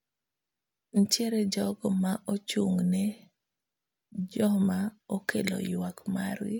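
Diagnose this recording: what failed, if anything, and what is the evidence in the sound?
Nothing in the chain from capture to playback shows a failure: the speech signal arrives intact, with no stage leaving an audible mark on it.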